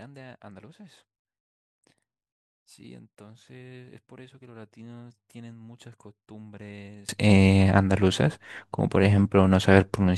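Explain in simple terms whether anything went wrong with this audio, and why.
For the first 7.09 seconds, the speech almost disappears when the stereo is folded down to mono. It turns faint, and then comes back to normal strength for the rest of the clip. The likely cause is one channel inverted: one side of the stereo pair is flipped upside down, so the speech that both sides share cancels itself out when they're added together, leaving only a weak trace behind.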